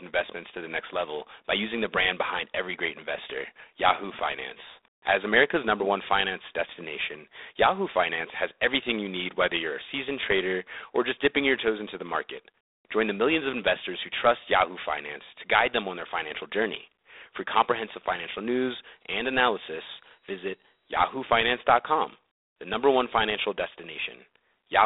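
Throughout, the speech carries G.726 ADPCM damage: a harsh, rasping hiss rising and falling with the speech level, which fits 24 kbit/s coding of prediction differences. A spectrogram shows a 300 Hz to 3.7 kHz band, with nothing above 3.8 kHz.

From 18.90 to 21.59 s, just after "comprehensive financial news", a thin, steady feedback whistle sits at 3.8 kHz, roughly 15 dB under the speech and swelling and fading slowly in level, likely from a loudspeaker-to-microphone loop at the edge of feedback. A spectrogram shows a single horizontal line.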